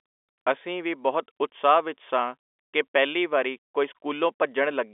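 No technical faults are audible in the speech, which sits within the 300 Hz to 3.5 kHz band of G.711 telephone coding.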